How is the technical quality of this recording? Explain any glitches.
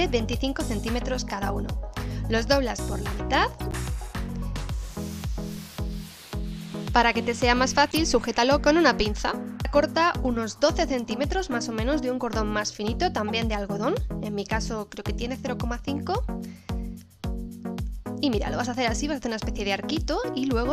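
Three brief glitches mar the recording, all of the corrupt frame decoded kind: 3.58–3.74 s, 7.89–7.97 s and 13.28–13.30 s. Damaged compressed frames were decoded anyway, so misread gains and codes put energy at the wrong frequencies, giving short chirps or noise blips peaking around -20 dBFS (about -15 dBFS at 7.9 s). A spectrogram shows narrow vertical smears; the waveform shows small spiky bursts.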